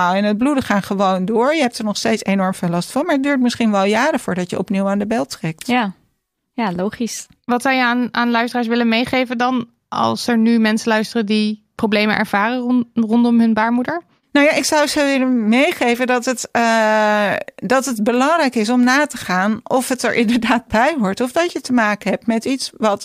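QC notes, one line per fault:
No faults found.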